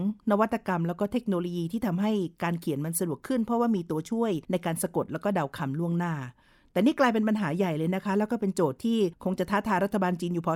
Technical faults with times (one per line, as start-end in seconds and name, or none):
none